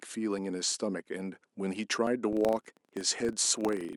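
At 0.38 s the speech jumps forward. Nothing is silent. The sound just skips ahead. The same happens at 2.07 s, with a larger jump. The first gap is about 10 ms and the second about 20 ms. Each is likely a dropped buffer (overrun). The program failed to read its samples in time, so the hardware overwrote them. The audio on either side was then butted together.

From 2.33 s to the end, a steady buzz sits under the speech at 25 Hz. It grows louder as the speech grows louder. This is a filter restarted on every block. The filter loses its memory at each block boundary and starts again from zero. That restart leaves a small transient 25 times a second. Those repeated ticks merge into a rough buzz.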